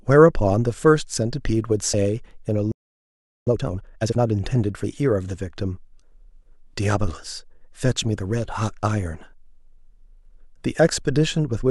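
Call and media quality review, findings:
Compressed frames skipped at 1.94 s. Decoder dropped about two 32 ms frames, missing from the stream or rejected as corrupt. Speech jumps ahead by about 70 ms.

Playback stall, 2.72 to 3.47 s. Output buffer ran dry, likely from delayed data delivery or a blocked audio thread. Speech cuts off mid-flow into 0.75 s of silence, then resumes once the player recovers.

Time-compressed catch-up, 3.47 to 4.21 s. Player drains its backlog after the stall by excising small segments and cross-fading the joins, running at 2x. Speech sounds rushed at unchanged pitch.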